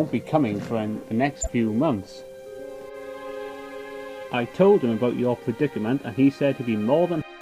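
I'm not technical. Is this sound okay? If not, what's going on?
No. From 1.41 to 1.49 s there is a brief glitch: a corrupt frame decoded. A few compressed chunks of the audio were damaged, and the player played them anyway, so for that instant sound lands at the wrong pitches, heard as a short chirp or burst of noise.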